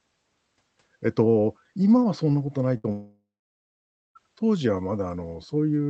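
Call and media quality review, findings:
Burst of packet loss, 2.77–2.86 s: short held buzz or hiss where sound freezes and fades for about 64 ms, then jumps ahead. Jitter buffer/concealment covering a lost run of packets, with roughly 60 ms of speech gone.

Long network dropout, 2.92–4.17 s: the concealed sound decays into about 0.9 s of dead silence before speech returns, about 1.24 s skipped. The likely cause is the network starving the receiver entirely. Band-limiting near 8 kHz fits an Opus call path.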